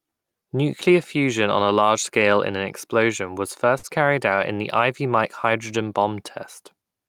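At 3.78 s, after "in an explosion was", and at 4.36 s, before "in the", short stalls from a late packet hold the sound about 53 and 20 ms while the buffer waits. Unlike a dropout, nothing is lost; speech resumes where it paused, just later.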